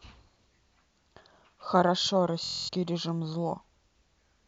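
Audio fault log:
2.44–2.69 s Bluetooth stutter: the speech breaks into a rapid machine-gun buzz for about 0.23 s as the receiver, missing late or lost packets, keeps replaying its last short buffer. The speech then picks up further along, as though it had continued underneath.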